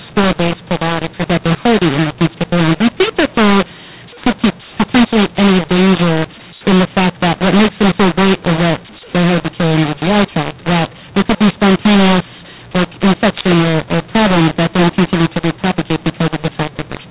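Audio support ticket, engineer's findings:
Harsh, distorted speech throughout, pauses filled with noise. Cause: mu-law and A-law mixed up. Samples coded as A-law, decoded as mu-law. Wrong law scrambles levels: some too loud, some too quiet, quietest lifted well above silence. G.711 telephone path working: audio capped near 4 kHz, consistent with 8 kHz sampling.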